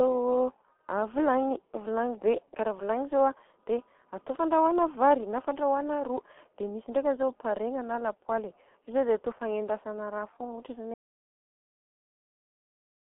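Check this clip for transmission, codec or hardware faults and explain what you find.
Two faults are present: heavy G.723.1 codec damage across the whole clip, and an audio dropout to silence near the end.

The G.723.1 codec damage lasts from start to finish. The speech is confined to a telephone band of about 250 Hz to 3.4 kHz. Everything above and below is gone, so the voice sounds thin and muffled. The coarse, slow-updating voice model makes it hoarse and smears the consonants. The damage is heavy, which fits G.723.1 running at about 6.3 kbit/s.

The audio dropout to silence starts at 10.94 s and runs to the end of the clip. The sound stops abruptly mid-flow. What follows is silence, with no room tone at all. The recording kept running while writing silence, so nothing from that stretch survives. The likely cause is a lost input, such as a disconnected device, a failed link or an accidental mute.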